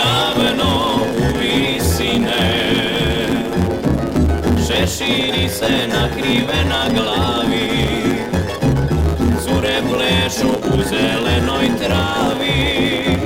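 Block size mismatch (truncated) runs throughout: each block's tail is discarded, giving a 109 Hz buzz and audio running 1.09 times fast at near-normal pitch.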